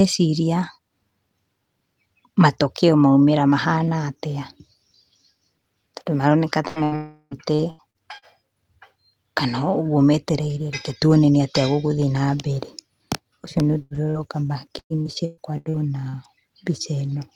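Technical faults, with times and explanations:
6.67 to 6.79 s and 6.84 to 6.95 s, burst of packet loss: two back-to-back holes of about 80 ms each, patched by stretching the last sound into a short fade before things jump ahead.
6.96 to 7.34 s, long network dropout: the sound smears into a fading buzz or hiss for roughly 350 ms, then goes silent for about 50 ms. A stall in delivery is the likely cause, losing around 360 ms.
7.55 to 8.25 s, repeated packet loss (robotic sound): four quick gaps, the longest 82 ms, totalling about 200 ms. About a quarter of the stretch is patched, so it sounds choppy.
13.82 to 13.93 s and 14.10 to 14.18 s, burst of packet loss: an 80 ms hole, then a shorter 40 ms one, each bridged by briefly continuing the last sound before the sound skips forward.
14.79 to 16.16 s, repeated packet loss (robotic sound): six gaps up to 120 ms long, about 440 ms lost in all. 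Nearly a third is concealed, giving a sustained choppy quality.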